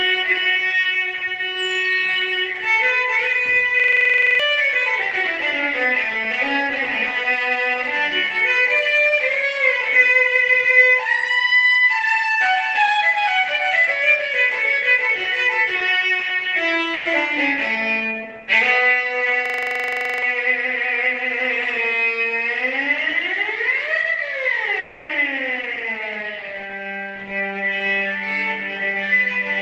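At 3.80 s a system hang loop starts and runs to 4.40 s. The system froze while the hardware kept replaying one ring buffer, which fits a 2048-sample buffer. A 42.67 ms piece repeats 14 times. It sounds like a machine-gun stutter at 23.4 Hz. About 0.7 s of audio is lost.

At 16.93 s a burst of packet loss cuts out 120 ms. The receiver extends the last sound to cover the gap and fades it down as the gap goes on. The audio then jumps ahead. The 120 ms in between is missing.

The hang loop returns from 19.46 to 20.22 s. A 42.67 ms piece now repeats 18 times, with the same stutter at 23.4 Hz. Again about 0.7 s of audio is lost.

From 24.79 to 25.12 s the last sound is held for 300 ms and fades as it goes. It never drops to silence. The audio then resumes further on, without the missing 300 ms. A long network dropout is the likely cause.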